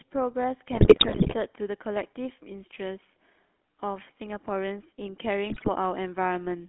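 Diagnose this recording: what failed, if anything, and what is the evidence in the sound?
The codec stage shows GSM full-rate coding throughout. The speech has the plainly audible buzzy, gravelly roughness of a coder that rebuilds the voice from a vocal-tract filter driven by sparse, regularly spaced pulses, which fits the 13 kbps full-rate codec. On a spectrogram, energy sits between 200 Hz and 3.4 kHz with nothing above. Harmonics look smeared and grainy rather than cleanly striated, and the waveform looks coarse where it should be smooth.

GSM bit errors, a network-stage fault, appear from 0.72 to 1.35 s and again from 5.50 to 5.69 s. Here the voice breaks into squawks, pops and gargling. Corrupted filter, pitch and gain parameters reach the decoder, so individual frames come out with a warped spectrum or a sudden jump in level. The pattern points to a weak radio link with an error rate around 5%. 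A spectrogram shows blocky frame-length smears and misplaced formant bands, and the waveform shows abrupt amplitude spikes.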